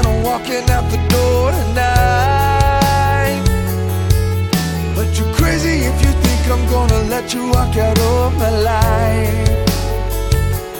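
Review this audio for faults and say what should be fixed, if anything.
No faults; nothing needs fixing.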